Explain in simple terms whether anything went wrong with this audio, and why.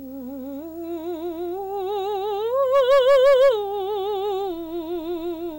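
Two things went wrong with this music. A video or display buzz runs through the whole clip. A screen or video cable leaked into the audio. It adds a low hum near 60 Hz with hiss on top, plus a thin whine near 15.7 kHz. It sits quietly beneath the music.

From 2.74 to 3.49 s there is hard clipping. The music got louder than the equipment could handle. The tops of the waveform were sliced off flat. That adds harsh, gritty fuzz to the loud parts of that stretch.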